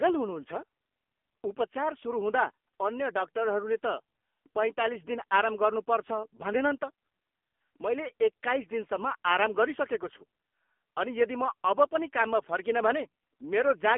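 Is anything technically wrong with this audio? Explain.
Yes. Throughout the clip the speech carries heavy AMR narrowband mobile codec damage. Nothing above 3.5 kHz survives, and the lows thin out below about 250 Hz, giving a phone-line band. The voice is rebuilt from a vocal-tract model excited by sparse pulses, and the buzzy, synthetic texture points to one of AMR-NB's low modes, around 6.7 kbps. That artificial buzz sets it apart from simple band-limiting, which narrows the sound but leaves it natural.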